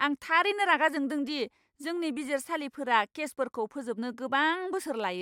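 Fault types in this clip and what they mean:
No faults are present in this speech recording.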